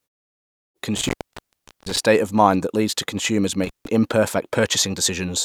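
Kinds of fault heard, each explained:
Intermittent contact: around 0.97 to 1.98 s and 3.64 to 3.87 s, a loose connection opens, cutting the speech for about 785 ms, then about 158 ms, with crackle at the edges.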